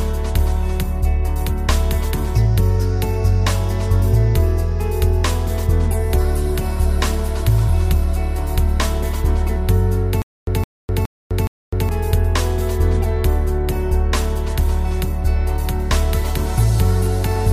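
From 10.22 to 11.89 s the same 164 ms burst repeats four times, each followed by 254 ms of digital silence, a steady 418 ms cycle. This stutter with silent gaps likely comes from a stalled player replaying its last fragment, losing that stretch of audio.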